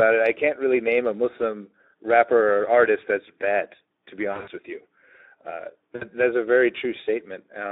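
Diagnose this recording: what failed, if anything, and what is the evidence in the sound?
The codec stage is at fault throughout: this is Speex, and its damage is plainly audible. The speech has that hoarse, grainy CELP texture, with too few bits left for the excitation, so voicing comes out noisy rather than clean. The audio is confined to roughly 250 Hz to 3.7 kHz, a narrowband telephone line. The overall coarseness fits a Speex bitrate of about 11 kbps.

There are also two network-stage dropouts covered by the speech codec's own packet loss concealment. The first runs from 4.31 to 4.50 s, just before "with you." Several short gaps are scattered across it, totalling about 120 ms, with the longest about 60 ms. The second is around 60 ms, from 5.95 to 6.05 s, just before "that's a very." In each one the decoder keeps extrapolating from its last pitch and filter with falling gain, so the sound smears into a fading buzzy, coloured tone.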